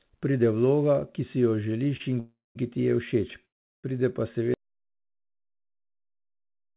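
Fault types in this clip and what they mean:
Short stall from a late packet: At 1.97 s one packet arrived late and the jitter buffer briefly had nothing to play. The receiver held the last sound for about 29 ms until the packet arrived, then resumed from the same point. Nothing is lost, but that moment is stretched slightly, with a slight buzz or dip. Like the rest of the clip, it sits on a band with nothing above 4 kHz, which fits a 64 kbps G.711 A-law call path.
Call audio freeze: The audio halts twice and then resumes where it stopped, with nothing skipped. The first halt, from 2.20 to 2.57 s, adds about 0.36 s, of which about 0.19 s is dead silence after the held sound fades. The second, from 3.45 to 3.86 s, adds about 0.38 s and is almost entirely silent. The likely cause is packets delayed in transit, which drained the jitter buffer until they arrived.
Audio dropout to silence: At 4.54 s the sound cuts off mid-flow and digital silence runs to the end of the clip, with no room tone. 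Unlike the freezes, the audio does not resume from where it stopped, so whatever followed is gone. This likely comes from the input being lost, through a disconnected device, a failed link or a stray mute, while the recorder kept writing silence.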